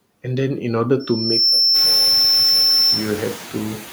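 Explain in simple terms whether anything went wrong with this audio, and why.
Two things went wrong.

From 0.99 s to 3.14 s there is loudspeaker feedback squeal. The microphone was picking up the loudspeaker it was feeding, and at one pitch the sound kept going round the loop and growing. It swells over about half a second into a steady, high whistle near 5.4 kHz that ends up a little louder than the speech itself, and then stops at 3.14 s.

Throughout the clip there are noise suppressor artifacts. A noise suppressor is processing that turns down whatever it judges to be steady background noise, working on each short slice of sound separately. Here it removes a large share of that noise, so the background dips noticeably between stretches of speech and comes back up underneath them. The room's own background noise grows louder from about 1.5 s onward, which gives the suppressor more to work against in the second half.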